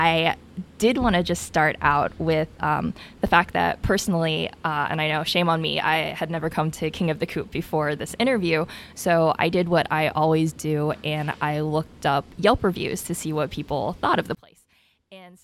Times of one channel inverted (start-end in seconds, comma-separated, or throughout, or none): 14.35-15.43